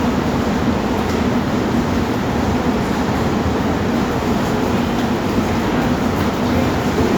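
No audible fault appears anywhere in the audio; level, timing and continuity hold steady throughout the recording.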